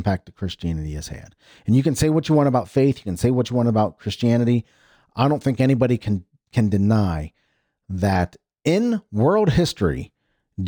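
Speech, with imaging from linear upsampling throughout: the top band is dulled, and faint mirrored content roughly 35 dB down fills 12 to 24 kHz, adding metallic shimmer to sibilants, consistent with straight-line interpolation from 24 kHz to 48 kHz.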